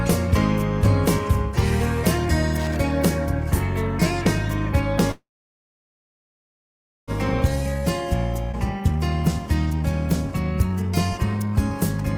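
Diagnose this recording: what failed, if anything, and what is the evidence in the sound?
Analogue wiring: loose connector crackle between 2.58 and 2.76 s. For under a fifth of a second the sound breaks into irregular scratchy crackle, as a worn or dirty contact repeatedly opens and closes and chops the signal. The bursts are random and rough-edged, with no fade and no jump in timing afterwards, which separates this from network dropouts. Those leave clean gaps or splices, not scraping.

Network and jitter buffer: a call audio freeze from 5.11 to 7.11 s. The sound stops, a brief buzzy continuation of the last moment fades out, and then there is about 1.8 s of silence before the audio picks up exactly where it left off. Nothing is lost; roughly 2 s of delay is inserted instead. The likely cause is held-up packets draining the jitter buffer. Unlike a skip, the sound resumes without any jump.

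Network and jitter buffer: a skip ahead at 8.52 to 8.56 s. Playback lurches forward with only a tiny gap of about 14 ms, and about half a second of material is simply gone. The sound before and after is butted almost directly together. Here audio is removed rather than delay added, which is the reverse of the freeze, and it fits buffered audio being discarded so that playback catches up.

Jitter buffer: four jitter buffer speed-up episodes follow, at 8.81 to 9.01 s (143%), 9.67 to 9.84 s (174%), 10.69 to 10.92 s (149%) and 11.35 to 11.57 s (154%). Each one sounds hurried but keeps the same pitch, because short pitch-period slices are cut out repeatedly, about a tenth of a second or more in each episode, to trim the excess delay. Unlike the skip, the shortening is spread out, so no single jump can be heard.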